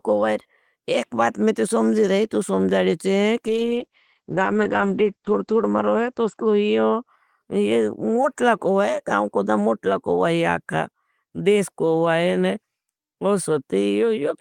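A call bitrate drop runs from 3.48 s to 7.53 s in this speech clip. The connection's bandwidth estimate fell and the encoder was pushed to spend far fewer bits, which fits a step down from around 32 kbps to about 9 kbps. At that rate the codec quantises coarsely and narrows its band from 20 kHz to 8 kHz, so the speech turns muffled and watery. It is at its worst for about 2 s before bitrate and brightness recover.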